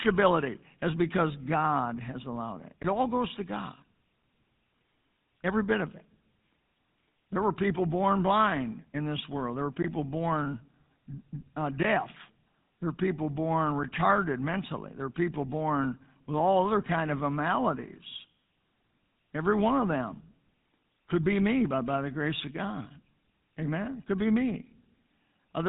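From start to finish the speech carries GSM full-rate codec damage. Nothing reaches above 4 kHz, and the excitation is rebuilt from sparse regular pulses, so the voice sounds plainly buzzy and gravelly throughout. That is consistent with a 13 kbps full-rate stream.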